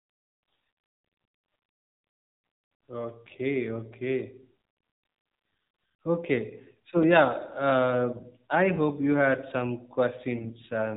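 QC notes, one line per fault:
throughout: AMR narrowband mobile codec. The speech has been squeezed through AMR-NB at 7.4 kbps, so everything above 4 kHz is gone and the voice sounds boxed-in and dull. At this low rate the vocal-tract model is fed by only a handful of pulses per subframe, which leaves the voice plainly buzzy and synthetic, with the fine texture of consonants and breath replaced by a coded approximation.
7.03 s: block of digital silence. A block of about 2.9 ms, which fits a 128-sample buffer, drops straight to silence and returns with no fade. Because the gap is so short it is heard less as a hole than as a single tick, produced by the hard step down to silence and the equally abrupt step back into the speech, which likely points to an output buffer not filled in time.
10.36 to 10.53 s: AMR bit errors. Near the end, for roughly 0.17 s, several consecutive codec frames arrive with a large share of their less protected bits flipped, on the order of one in seven. 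Pitch and level hold roughly steady, but the excitation pulses land in the wrong places and the finer gain and spectral values go astray, so the voice briefly turns hoarse, scratchy and gargly before the clip ends.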